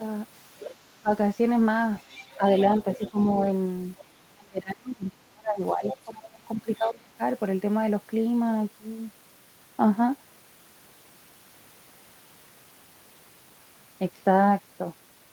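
From 0.0 to 1.09 s the talker's speech is suppressed in double talk. It dips in pieces, about 400 ms in all, falling as far as roughly 35 dB. Between 0.59 and 0.72 s the other side's voice leaks through, at roughly 15 dB below the speech. The likely cause is an echo canceller that cannot tell the talker from the loudspeaker echo, so it turns both down and still lets some echo slip past.

From 1.97 to 4.03 s the other side leaks through again, quieter, roughly 20 dB down. Inside that span, 2.36 to 3.27 s, the speech dips briefly, around 200 ms in total, by roughly 15 dB.

The longest suppression runs from 4.34 to 7.21 s. About two seconds of speech drop away, by up to roughly 30 dB. From 5.84 to 6.89 s the leaked voice returns at roughly 15 dB below the speech.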